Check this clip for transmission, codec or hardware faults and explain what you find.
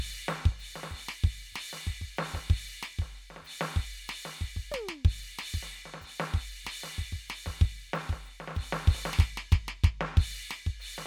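Listening through the music, nothing stood out as a problem.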